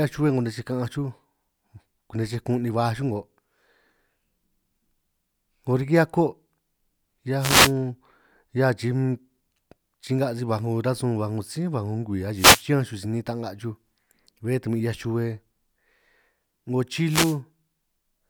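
Wireless microphone noise hits at 7.39–7.73 s, 12.34–12.65 s (after "baj 'ngo ngwii") and 17.04–17.38 s: the radio signal fades, and receiver static briefly swishes over the speech.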